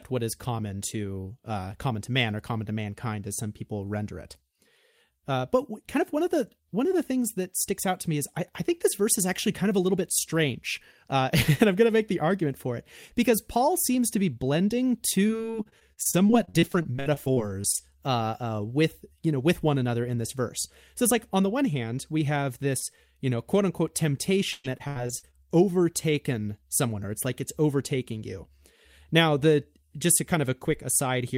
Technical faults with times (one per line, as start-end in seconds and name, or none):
15.27-17.80 repeated packet loss (robotic sound)
24.52-25.35 repeated packet loss (robotic sound)